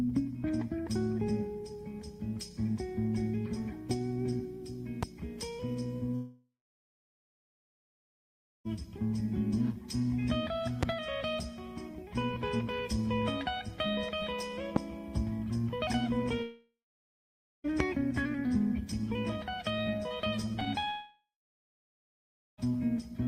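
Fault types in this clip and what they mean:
Loud pop: A sudden voltage pulse, likely from a plug, switch, static or driver glitch, entered the signal. It shows as single sharp pops at 5.03 s (about 15 dB above the sound) and at 10.83, 14.76 and 17.8 s (about 20 dB), with the audio continuing underneath.
Long network dropout: Audio likely stopped arriving over the network for a long stretch. The receiver stretches the last sound into a fading buzz, then leaves silence: 6.15 to 8.67 s (2.5 s lost, over 2 s silent), 16.43 to 17.66 s, and 20.9 to 22.6 s, resuming without the missing part.
Repeated packet loss (robotic sound): Packets went missing again and again between 20.46 and 20.88 s, six holes of up to 27 ms each, patched by continuing the previous sound. About a fifth of that span is filled in, giving a choppy, robotic texture just before the final dropout.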